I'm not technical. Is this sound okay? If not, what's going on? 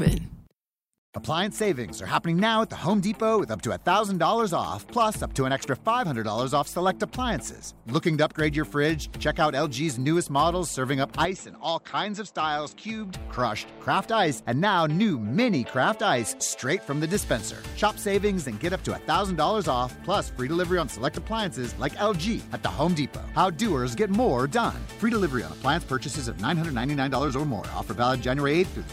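No. From 11.25 to 13.14 s the sound turns duller and quieter with a different faint hiss, then recovers, likely an input switched to a poorer device.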